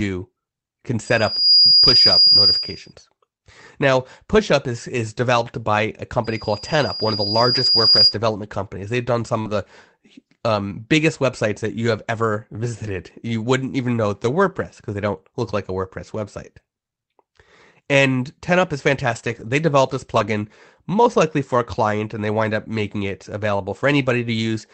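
Loudspeaker feedback squeal runs from 1.05 to 2.93 s and again from 6.24 to 8.17 s. Both times a single 4.8 kHz tone swells up over the speech, within about half a second the first time and over roughly a second and a half the second time, and sits around 10 dB above it. The microphone is picking up the loudspeaker it feeds, and at that frequency the loop gain tops one, so the tone keeps feeding itself.

Short concealed packet loss hits at 9.41 to 9.47 s, just after "done some". About 40 ms of audio never reached the decoder in time, and the receiver bridged roughly 37 ms of it by extending the preceding sound. What you hear is a brief smear before the real audio resumes.

Lost packets rebuilt from error correction overlap that spot at 9.45 to 9.51 s (40 ms), then recur at 12.87 to 12.89 s (20 ms), at 19.07 to 19.41 s just before "developed this" (180 ms), and at 20.15 to 20.29 s (80 ms). 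Each missing stretch was replaced with the low-bitrate Opus copy carried in the following packet, so there is no gap, but those moments turn rougher and noisier within the call's 8 kHz band.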